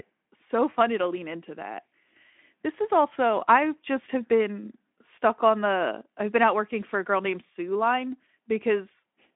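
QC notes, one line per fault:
No faults found in this speech clip. The Speex codec path is audible as a phone-band sound, limited to about 200 Hz to 3.5 kHz with nothing above 3.8 kHz, and carries the light coding texture that fits a 15 kbps setting.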